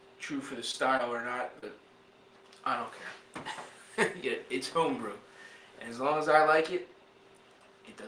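Three short concealed packet losses interrupt the audio at 0.71–0.75 s, 0.97–1.01 s and 1.59–1.64 s. About 20 ms, 20 ms and 40 ms went missing, which fits one lost 20 ms packet twice and then two in a row. The receiver papered over each gap by extending the preceding sound before blending back, so each one sounds like a brief smear or wobble. On a spectrogram the patches show as frozen, smoothed bands.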